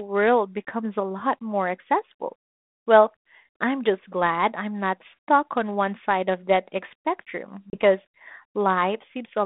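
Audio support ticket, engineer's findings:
Packet loss on an ADPCM call, 7.70 to 7.78 s. Hard-edged silent gap, about 30 ms, likely a few lost packets. Decoder's adaptive predictor and step size lose sync with the sender and need a moment to catch up. Band-limited 32 kbit/s G.726 path.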